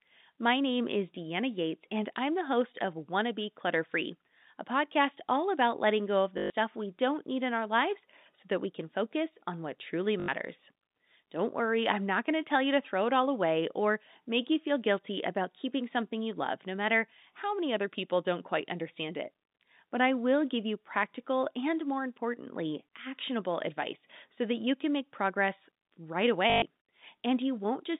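At 6.38 s, after "about letting go of", the sound stutters for 120 ms before "we don't need in". This is packet loss with the last packet repeated. It happens again at 10.2 s for 80 ms, after "focus on what truly", and at 26.5 s for 120 ms, after "can make progress right". Each gap is filled by replaying one short chunk. The loop buzzes at 50 Hz, which fits 20 ms packets. Through the narrow telephone band of the G.711 line, each one sounds like a brief robotic judder.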